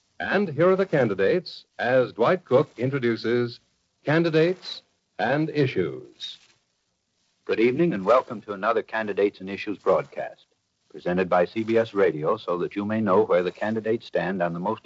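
No technical faults can be heard in this audio.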